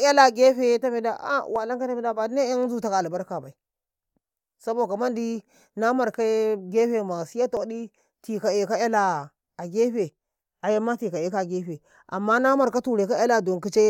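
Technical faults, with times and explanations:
1.56 s and 7.57 s, overlap between stream segments: a tiny skip in the speech, six seconds apart. Adjacent segments claimed overlapping time, so the player discarded about 17 to 19 ms of real sound at each boundary, leaving a jump in the waveform.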